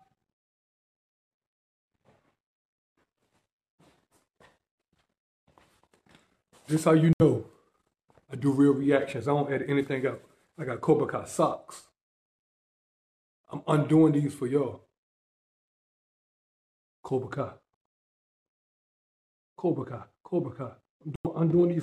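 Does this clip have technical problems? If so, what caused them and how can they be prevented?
Yes. Corrupt frame muted: sudden silent holes at 7.13 to 7.22 s and 21.16 to 21.27 s, consistent with three and four rejected codec frames replaced by silence. Unlike an underrun, the sound afterwards stays on time. Prevent it with checksummed, error-corrected transport or retransmission.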